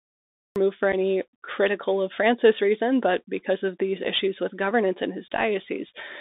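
Speech heard through a Bluetooth CVSD headset codec for its whole length. Everything sits between about 250 Hz and 3.7 kHz, with a granular hiss under the speech and scratchy s sounds. That grainy, slope-overloaded roughness, which fits a 64 kbps one-bit-per-sample link, is what separates it from simple telephone band-limiting, which would sound muffled but clean. The clip has a cut-off start: digital silence runs until 0.56 s, and the sound then begins abruptly in mid-utterance with no attack or fade-in. A quiet opening would rise gradually out of room noise, while this one jumps from digital silence straight into an ongoing sound. Between 0.92 and 0.94 s, just before "critical of", there is unconcealed Bluetooth headset packet loss. About 7.5 ms of audio, roughly a couple of packets, drops out with hard edges, and the speech returns momentarily quieter. Concealed loss would be smoothed over, but here the gap is left as a bare hole.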